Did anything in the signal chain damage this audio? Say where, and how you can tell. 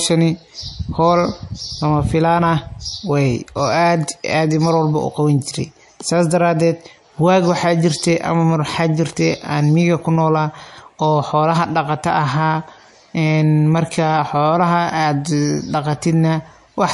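Yes, the codec stage damaged it. Nothing reaches above 11.3 kHz across the whole clip, and the speech has a swirly, watery quality, which points to a low bitrate around 48 kbps. That's likely MP3 compression, cutting the top and dropping weak frequency lines frame by frame.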